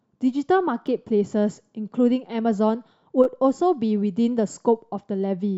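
At 0.87 s, 3.24 to 3.26 s and 4.53 s the speech has repeated buffers. Each time new audio did not reach the output in time, so the device replayed its last block of about 11.6 ms, which fits a 512-sample buffer. It repeats once at 0.87 s and 4.53 s and twice at 3.24 s, with a hard join at each repeat. Being so short, each sounds like a click or a brief buzz, and essentially no audio goes missing.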